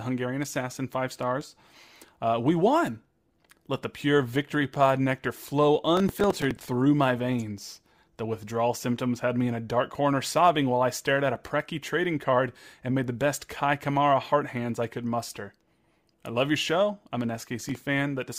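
Processor overload crackle hits this speech clip from 5.97 to 6.61 s and again from 17.60 to 17.81 s. Short buffers, around 5 ms each, miss their deadlines in a run and replay stale audio, producing gritty tearing: roughly fifteen misses in the first burst, several in the second.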